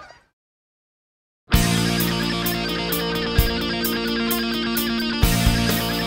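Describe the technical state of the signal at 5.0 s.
At 5.0 s the signal is intact, with no dropout, clipping, glitch or other technical fault present at that point.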